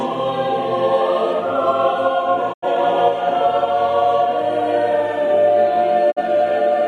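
A digital broadcast dropout strikes twice in this music, where the receiver stopped getting valid frames and muted until good ones returned. From 2.52 to 2.67 s the sound fades out over about 20 ms and falls silent, a gap of about 85 ms that fits two lost frames. From 6.10 to 6.21 s a shorter hole of about 43 ms, consistent with a single frame, opens the same way. The music resumes further along each time, so the missing stretch is simply gone.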